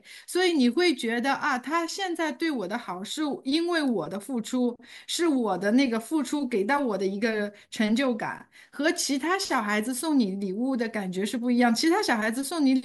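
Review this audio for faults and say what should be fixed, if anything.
At 5.26 s a handful of samples were likely dropped from the stream. That leaves a gap of a tiny fraction of a millisecond, so the waveform jumps straight to a later value and the speech carries one sharp click. Keeping the audio buffer serviced on time, without underruns, prevents dropped samples like these.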